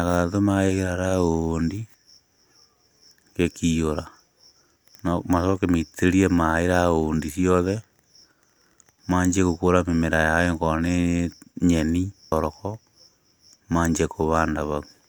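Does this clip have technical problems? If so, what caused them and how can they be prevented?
Yes. At 12.31 s the speech jumps ahead abruptly with a brief blip, and part of the programme is missing. This is a stream segment skipped fault. The likely cause is that one chunk of the segmented stream failed to arrive or decode. The player did not stall or retry. It moved straight on to the next segment, so the audio resumes later than where it stopped. Prevent it with reliable segment delivery and player retries before skipping.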